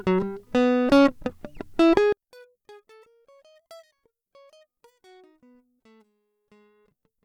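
From 2.13 s to the end, the music drops about 37 dB to a faint residue, likely one channel inverted, cancelling shared content in mono.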